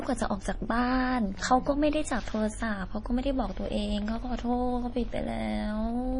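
Running through the whole speech clip is damage that points to MP3 compression, likely at a low bitrate of around 32 kbps. Short of bits, the encoder has cut the treble outright, leaving nothing above about 10.6 kHz, and has dropped weak frequency lines that flicker on and off from frame to frame. The damage is heavy: the speech sounds dull, watery and swirly, with metallic chirping on s sounds and smeared consonant onsets.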